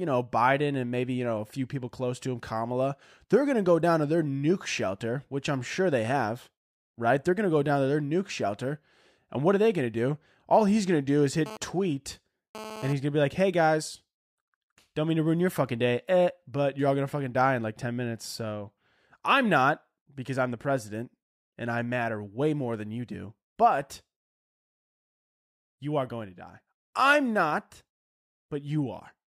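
From 11.46 s to 12.93 s, a GSM phone buzz sits about 13 dB below the speech: a hard, raspy 217 Hz tone rich in harmonics. The audio circuitry is rectifying a nearby 2G handset's transmit bursts, and this brief burst fits a data transfer.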